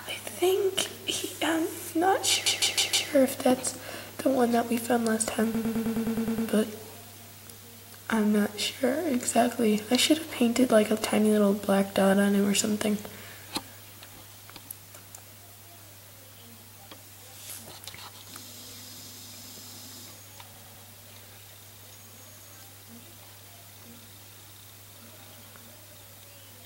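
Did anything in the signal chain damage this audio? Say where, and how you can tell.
Yes, repeated frames at the codec or storage stage: a block of about 157 ms replays four extra times at 2.46–3.09 s, and a block of about 105 ms replays nine times at 5.54–6.48 s and three times at 20.54–20.85 s. Re-decoding identical compressed frames causes the stutter. A spectrogram shows tiled identical blocks.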